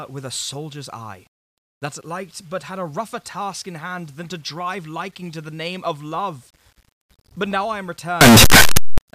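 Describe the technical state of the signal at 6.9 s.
At 6.9 s the speech signal is intact, with no dropout, distortion or other fault at that moment.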